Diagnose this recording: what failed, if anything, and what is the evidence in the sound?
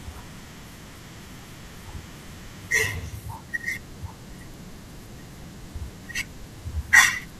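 Crude rate conversion from 2.67 s to the end at 7.40 s, at the sample-format conversion stage: a gritty, inharmonic fizz rides on the speech. The pattern points to 44.1 kHz being resampled to 48 kHz by repeating samples without filtering, leaving error around 20 dB below the speech.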